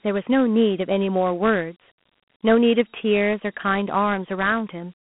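Speech runs through Dialogic VOX ADPCM for the whole clip. The sound sits in a telephone band of roughly 150 Hz to 3.4 kHz with nothing above 3.9 kHz, which points to 4-bit samples at 8,000 per second, around 32 kbps. The coarse 4-bit steps leave plainly audible damage: a gritty hiss that rises and falls with the speech. That grit is what separates it from a clean band-limited phone line, whose noise stays steady.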